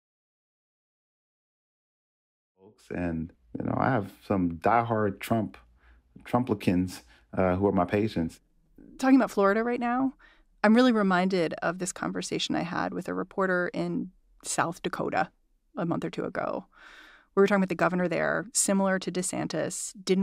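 No technical faults are present in this speech recording, and the only level change is an even fade-in that begins around 2.5 s and reaches full level by 3.41 s without any click or hard edge.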